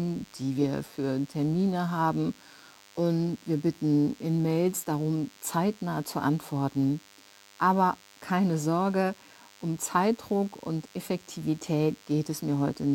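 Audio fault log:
throughout, DECT cordless phone buzz: a nearby DECT handset or base station is transmitting radio bursts every 10 ms, and the audio circuitry rectifies them. This leaves a thin, steady buzz at 100 Hz, rich in harmonics, sitting well beneath the speech.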